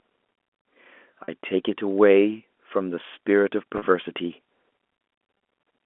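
A telephone-band speech recording, carried over G.711 with its band of roughly 250 Hz to 3.4 kHz, has packet loss with pitch repetition at 1.24–1.28 s, 3.78–3.82 s and 5.38–5.40 s. The first two gaps last 40 ms and the last lasts 20 ms. Each gap is bridged by repeating the last pitch period, which gives a brief held, buzzy tone. On a waveform this shows as identical repeating cycles, and on a spectrogram as frozen, flat harmonic lines.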